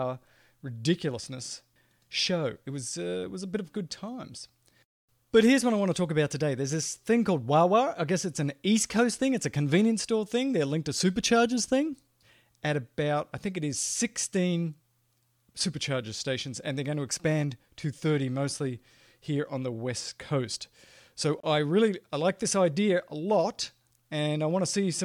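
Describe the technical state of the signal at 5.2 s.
At 5.2 s the speech signal is intact, with no audible fault at that moment.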